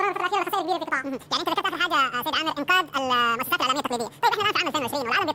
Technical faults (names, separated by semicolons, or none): audio read two samples at a time (double speed)